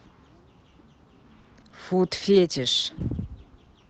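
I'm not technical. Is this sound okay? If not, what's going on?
No. At 1.39 s the speech briefly hangs, with one sound held a touch too long and a faint buzz, for about 0.07 s before it carries on. This is a short stall from a late packet. One piece of the call arrived late, the receiver ran out of audio to play, and it stretched the last sound for about 50 ms until the piece showed up. Nothing was lost, but the timing stumbles.

Just after that, at 1.60 s and again at 1.68 s, there are two tiny smears or wobbles, each lasting about 0.04 s, and a quick consonant there may seem to blur away. This is short concealed packet loss. About 20 ms of the call went missing each time, and the receiver covered each gap by continuing the sound it had just played before blending back into the real audio.

From 2.04 s to the end, the speech turns rougher and more watery. It is at its worst for just over a second. 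This is a call bitrate drop. The call judged that its connection had less room, so the audio was squeezed into far less data. The speech was coded more coarsely and sounds less clear than before 2.04 s.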